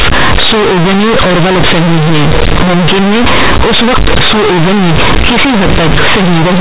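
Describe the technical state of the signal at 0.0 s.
At 0.0 s, as through the whole clip, companded audio is being read as linear: mu-law bytes reach the output as plain 8-bit samples without expansion. Quiet and loud passages come out equally large, so the speech sounds very loud and buzzy, with heavy noise in pauses.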